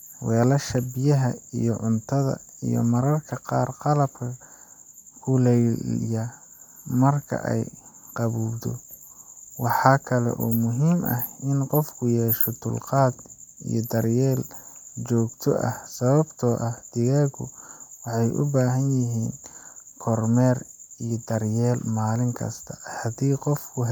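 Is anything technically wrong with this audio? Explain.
No, nothing technically wrong turns up in this speech recording on listening.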